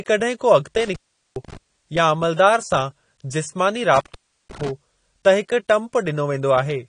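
Across the whole speech clip the sound is dull and smeared, with plainly audible codec damage and nothing above 10 kHz. That pattern points to AAC compression, likely AAC-LC at a low bitrate, which fits around 32 kbps. At that rate the encoder quantises its frequency lines coarsely against a hearing model, pulls the cut-off down and leaves gaps in the spectrum, giving sustained sounds and sibilants a warbling, fizzy edge.

From 0.75 to 1.57 s the audio breaks up and drops out, with crackle at the boundaries. This is an intermittent contact, a loose plug or cable briefly losing connection, and here the line stays open for about 0.40 s of that span. A second intermittent contact follows from 3.95 to 4.69 s, with an open stretch of about 0.35 s and the same break-up and dropout.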